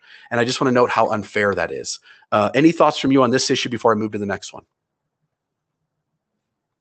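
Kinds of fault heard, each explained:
Clock drift between sender and receiver: The sending device's audio clock runs faster than the receiving one, here by around 4 percent, so samples arrive more quickly than they are played out. The receiver's jitter buffer keeps creeping toward overflow, so the receiver must throw away small slices of audio to stay level. That removal never stops across the clip.
Repeated timing corrections: To cope with the faster sender, the receiver repeatedly trims short pieces from the stream, shortening rather than stretching the audio each time. These cuts begin just after "I just" at about 0.65 s and continue to about 6.59 s, landing at irregular spacing. Together they push playback to roughly 104 percent speed.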